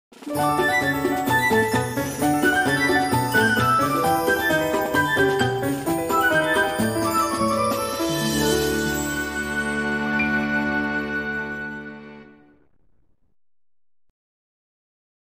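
A loud pop, actually two in quick succession, hits between 8.93 and 9.15 s, jumping a few dB above the surrounding audio while the sound carries on underneath. It's likely a voltage spike from a plug, switch or static discharge getting into the signal chain.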